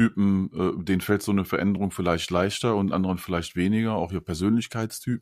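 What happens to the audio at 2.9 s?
Nothing goes wrong at 2.9 s: the speech there plays through intact, with no dropout, click, distortion or other fault.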